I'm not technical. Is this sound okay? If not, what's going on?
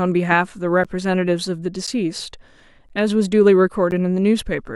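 No. From 0.84 to 3.92 s the speech has periodic USB or driver dropouts: about four brief gaps of silence, each about 10 ms, spaced 1.02 s apart.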